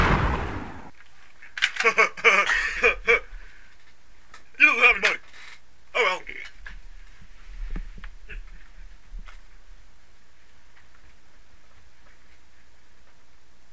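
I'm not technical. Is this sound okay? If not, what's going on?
No, it isn't quite okay. There are two problems close together.

At 4.32 s there is a skip ahead. About a second of sound never arrived in time, or was thrown away because too much had piled up. Playback jumps straight past the missing part. There is no pause and no filler, so the sound before and after the jump is stitched together directly. Whatever happened in that second is simply gone.

Right after that, from 4.42 s to 6.78 s, there is a jitter buffer speed-up. The receiving end was holding more sound than it wanted, which added delay. To catch up, it kept snipping out tiny slivers, each one or a few vibration cycles long. Together they add up to about a third of a second. The sound plays about 11% faster, but the pitch stays the same. It sounds hurried.

The sound came through a call line that uses the G.722 codec. That line carries nothing above 8 kHz, so the very top of the sound is missing.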